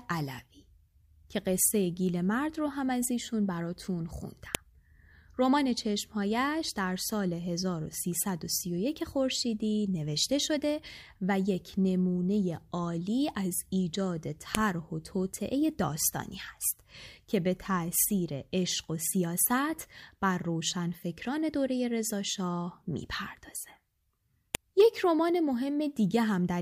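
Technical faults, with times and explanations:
4.55 s, 14.55 s and 24.55 s: file header played as audio. The speech was joined from 10-second pieces whose header bytes were left in and played as samples, so each join brings a sharp, loud click lasting only a millisecond or so.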